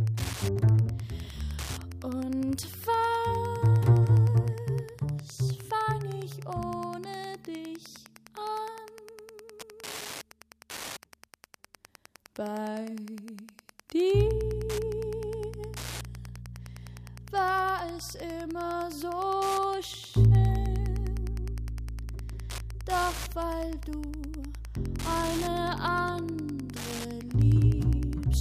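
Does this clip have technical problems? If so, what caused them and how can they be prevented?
Yes. Wi-Fi interference runs throughout: a nearby radio's beacon, every 102.4 ms, is rectified by the audio circuit, giving steady ticking about ten times a second, roughly 20 dB down. Keep routers and phones well away from the audio gear, and use shielded, properly grounded cables.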